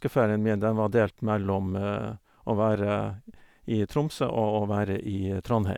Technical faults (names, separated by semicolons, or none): none